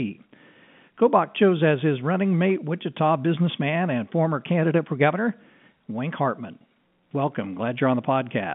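No technical faults can be heard anywhere in this speech.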